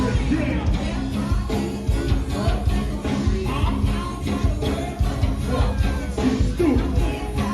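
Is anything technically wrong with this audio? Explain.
No, there is nothing technically wrong with this audio. No dropout, distortion or other fault can be heard anywhere in it.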